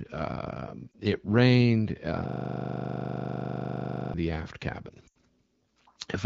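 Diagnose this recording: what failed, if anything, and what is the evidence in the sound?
Lost AMR speech frames at 0.92–0.95 s, just before "it rained uh", and at 5.07–5.17 s. This is a radio or network stage fault. Corrupted frames failed their checks, and the AMR-WB decoder concealed them by repeating its last good parameters with falling gain. The first is a brief dip. The second, about 80 ms long and consistent with four 20 ms frames, drops to near silence within two frames before speech returns.

System hang loop from 2.29 to 4.14 s, after "uh it rained uh" and before "the aft". This is a driver or buffer fault. The host stalled while the audio hardware kept replaying its ring buffer, so a 40 ms slice repeats about 46 times. At 25 Hz it sounds like a rasping stutter-buzz, which fits a 40 ms buffer.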